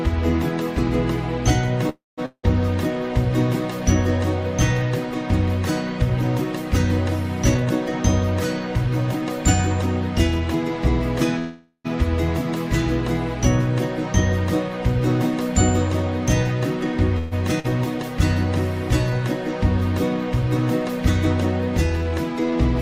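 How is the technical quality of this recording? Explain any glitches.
The recording has repeated network-related glitches: three freezes, a dropout, a skip, and stretches played slightly fast and slow.

Call audio freeze at 1.89–2.20 s, 11.39–11.87 s and 17.18–17.34 s: likely delayed packets emptied the jitter buffer, so the last sound fades into a buzz or hush, then resumes intact.

Long network dropout at 2.26–2.45 s: arriving audio likely stopped, a brief fading buzz then near-silence fills the gap, and about 0.18 s never returns.

Jitter buffer speed-up from 7.55 to 10.65 s: excess buffered audio was trimmed by removing pitch periods, roughly 0.15 s in total, so the sound runs about 5% faster at unchanged pitch.

Skip ahead at 17.60–17.66 s: a stretch of roughly 0.4 s was discarded while later audio waited, so playback jumps forward with almost no gap.

Jitter buffer slow-down from 19.10 to 22.57 s: pitch periods were repeated to rebuild the reserve, adding 130 ms, so the sound drags about 3% slower at the same pitch.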